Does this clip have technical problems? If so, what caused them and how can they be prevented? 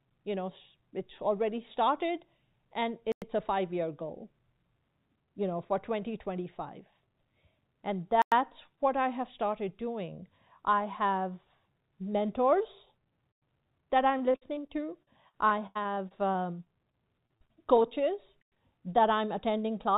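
Yes. The speech has gaps between chunks at 3.12, 8.22, 13.32 and 18.42 s. Each is a 100 ms hole, spaced 5.1 s apart, where consecutive stored or streamed chunks fail to join seamlessly. This likely comes from codec padding or a player starting each chunk late. Prevent it by stitching chunks gaplessly, trimming encoder padding and pre-buffering the next chunk before the current one ends.

Repeated packet loss (robotic sound) runs from 14.18 to 17.86 s. Twenty-one dropouts remove about 0.56 s in total, the longest 84 ms, and most of that time is patched by extending the preceding sound, which leaves the passage choppy. Prevent it with a steadier network path, forward error correction and a larger jitter buffer.

The call path itself, G.711 A-law at 64 kbps, carries nothing above 4 kHz.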